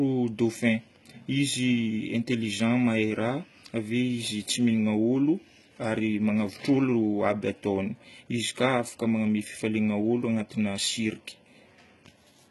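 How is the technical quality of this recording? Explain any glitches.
The recording shows heavy codec damage across the whole clip. The likely cause is HE-AAC compression at a very low rate, consistent with roughly 16 kbps. The encoder spends its few bits on the lower spectrum and synthesises the treble by copying lower bands upward under a coarse envelope, so the upper harmonics no longer line up with the speech beneath them. Nothing survives above 11.8 kHz, and s sounds come out gritty, metallic and lispy.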